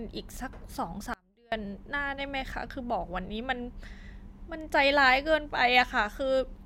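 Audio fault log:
1.14–1.52 s, audio dropout to a faint residue: the speech cuts off abruptly for about 380 ms and the gap is not silent. A faint trace of the sound carries on underneath, roughly 30 dB below its normal level, before the full signal snaps back mid-flow. The hard edges set it apart from a natural pause or a fade. The likely cause is a brief loss of the main feed while the path after the break stayed live, letting only a weak leak through.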